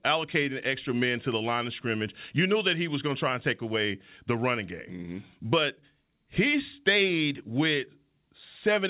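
No technical faults can be heard in this speech recording. It has come through a WebRTC call path that is working normally, with nothing above 4 kHz and the narrowband character that points to G.711 mu-law coding.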